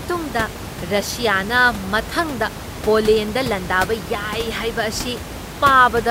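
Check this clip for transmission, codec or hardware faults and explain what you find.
No transmission, codec or hardware fault can be heard in this speech clip. Room noise sits in the background about 11 dB below the speech; it belongs to the recording space, not the system.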